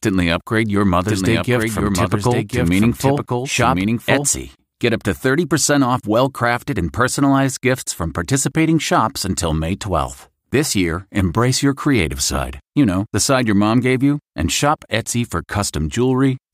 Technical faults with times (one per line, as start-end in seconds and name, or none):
1.07-4.27 doubled audio track